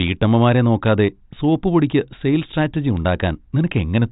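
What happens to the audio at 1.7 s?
At 1.7 s the speech is intact, carried by the G.726 telephone coding at a rate that leaves only faint coding noise, with nothing above about 3.8 kHz.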